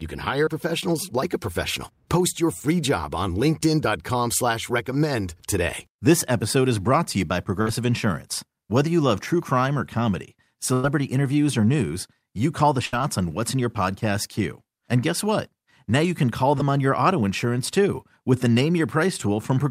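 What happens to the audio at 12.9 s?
A burst of packet loss hits the speech from 12.86 to 12.94 s. Audio packets were lost or arrived too late to play, so the receiver filled a gap of about 70 ms by carrying the last sound forward and lowering its level as the gap went on. That concealment comes out as a held buzz if the preceding sound was voiced, or a fading hiss if not. Speech then resumes with about 70 ms missing.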